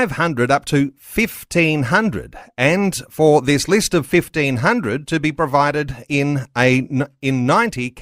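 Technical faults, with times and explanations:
Nothing stood out on listening to this speech.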